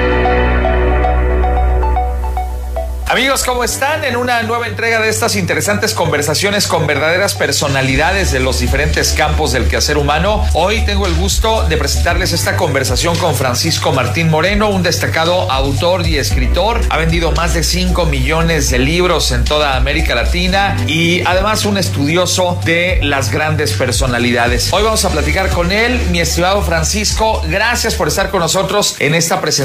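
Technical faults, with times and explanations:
1.93 to 4.89 s, digital radio blending to analogue: the receiver lost its digital stream and cross-faded, over roughly 0.36 s, to the station's FM broadcast, then faded back at 4.89 s. The FM stretch sits about 2 dB lower, with steady hiss around 30 dB beneath the sound. Unlike a dropout or codec glitch, the audio never stops or warbles; it slides smoothly into a noisier copy and returns.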